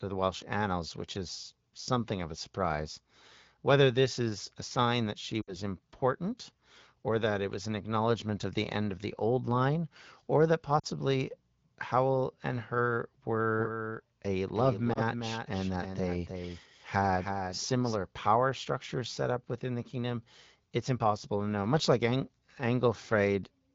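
Speech over an AMR wideband (HD Voice) link at 12.65 kbit/s has three brief glitches from lost AMR speech frames: at 5.41–5.56 s and 10.79–10.86 s the sound drops to near silence, and at 14.93–14.99 s there is a single short dip. Radio errors corrupted frames, so the decoder kept repeating the last good pitch and vocal tract settings at falling gain. From 13.56 to 17.94 s a doubled audio track appears: a dry, full-band copy sits roughly 300 ms behind the original at about 5 dB lower, starting and stopping abruptly with no reverberant tail. The likely cause is a second capture through a slower path, or an edit that left two out-of-step copies in the mix.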